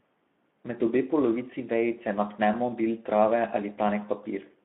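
Speex codec damage runs from start to finish. This CELP speech coder is working at a low setting, consistent with roughly 11 kbps, so too few bits reach the excitation signal that drives its vocal-tract filter. The speech comes out noisy and hoarse. The sound is also held within a line band of about 200 Hz to 3.5 kHz, giving it a thin, telephone-like quality.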